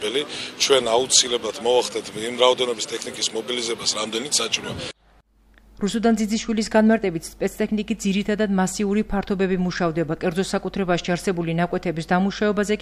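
Nothing stood out as a technical problem on listening to the audio.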